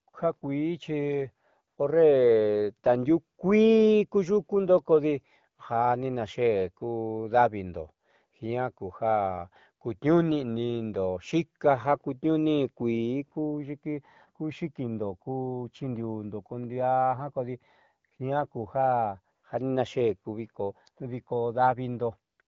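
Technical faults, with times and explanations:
0.09–0.13, 0.39–0.41, 1.67–1.77 (just before "horre tandiuukuii kuyukundo"), 18.09–18.11, 18.17–18.19, 19.35–19.43, 22.33–22.39 and 22.41–22.48 s: AMR comfort noise. Speech frames stop for 20 to 100 ms and smooth synthetic hiss replaces the real background, unlike the dead silence of a dropout.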